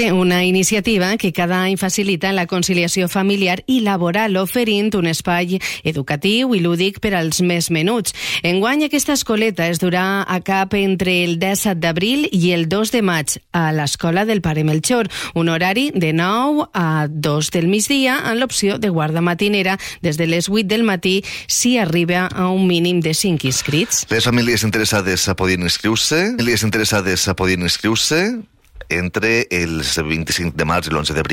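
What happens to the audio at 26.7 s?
At 26.7 s the audio is inside a stream segment repeat, running from 26.38 to 28.38 s. The player fetched or queued the same segment twice. Roughly 2.0 s of the programme plays again, with a small blip where playback jumps back.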